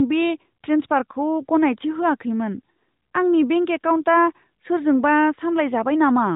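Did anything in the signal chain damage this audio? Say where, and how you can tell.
No, nothing in the chain damaged this speech.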